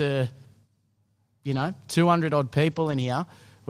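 Speech, with two stretches of lost packets rebuilt from error correction, at 1.51 to 1.65 s and 2.71 to 3.05 s. The sound never drops out. Instead it turns rougher and noisier, because each lost packet is replaced by a low-bitrate copy carried in the following packet. Plain loss concealment sounds different: it smears, repeats or fades out the last good audio. Here the sound keeps moving, only coarser, and the second, longer stretch points to more packets lost.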